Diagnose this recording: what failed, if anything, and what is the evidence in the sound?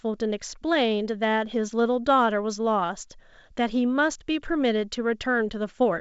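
Nothing in the speech points to a failure at any stage: the audio stops at about 7.7 kHz, consistent with G.722 wideband telephone coding and fitting its full 64 kbit/s mode, and the coding leaves at most a faint trace on the sound.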